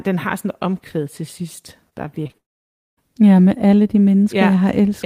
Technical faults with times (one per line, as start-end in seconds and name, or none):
1.89-2.36 repeated packet loss (robotic sound)
2.38-2.99 long network dropout